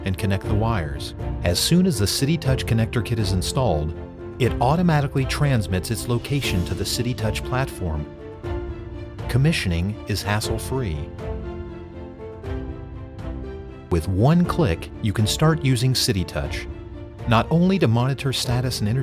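No technical faults can be heard anywhere in the audio.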